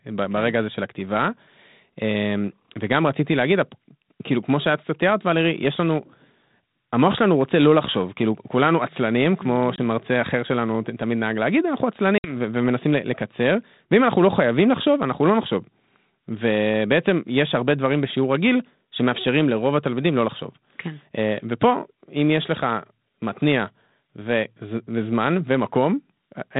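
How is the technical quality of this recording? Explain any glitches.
The recording has two short dropouts, both from packet loss on an ADPCM call. The band-limited telephone sound fits 32 kbit/s G.726 coding.

At 9.76 to 9.78 s, and again at 12.18 to 12.36 s, the speech cuts to a hard-edged silence, about 20 ms the first time and 60 ms the second, roughly one and then about three packets. When the speech resumes, it comes back with brief distortion before settling. The missing packets were filled with silence, so the receiving decoder's adaptive predictor and step size drifted away from the sender's, and needed some tens of milliseconds to resynchronise.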